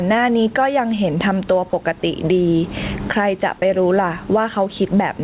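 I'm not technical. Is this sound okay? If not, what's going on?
No. Gain pumping runs through the whole clip: the level was likely set far too high, so an automatic limiter keeps yanking it down on loud speech, squashing the sound.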